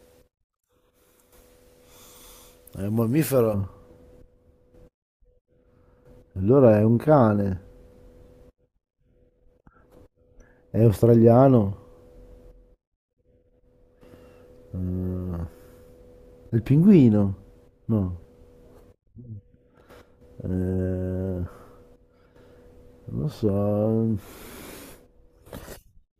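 From about 3.54 s to the end, there's de-emphasis applied wrongly: a treble cut meant to undo pre-emphasis that wasn't there, or applied twice, so the top end slopes away smoothly, down about 11 dB at 10 kHz relative to 1 kHz. The speech goes dull and muffled.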